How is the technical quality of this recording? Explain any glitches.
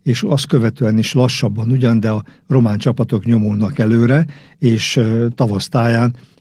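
Listening closely, nothing in the recording stood out as a technical problem, and there are no glitches to explain.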